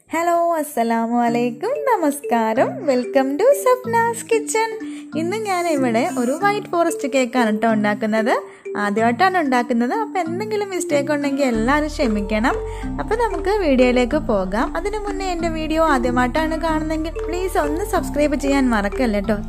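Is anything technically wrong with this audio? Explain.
No, nothing here sounds technically off; it all comes through just as it should.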